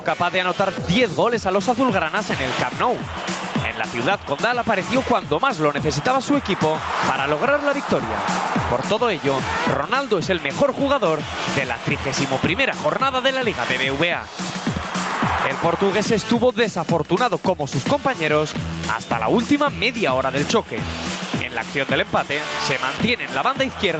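Throughout, gain pumping: the gain swings by around 10 dB, likely from a fast limiter pulling it down on loud sounds, leaving a flattened, squashed waveform envelope. The spectrogram stops at 8 kHz.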